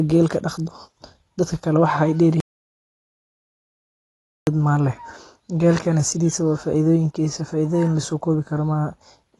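Throughout, the speech sounds dull and smeared, with a fizzy warble on sibilants. Nothing sounds above 11.5 kHz. This is likely AAC compression at a low bitrate, around 28 kbps. From 2.40 to 4.47 s comes an audio dropout to silence. The speech cuts off completely, with no room tone, for about 2.07 s. The input was likely lost while recording continued.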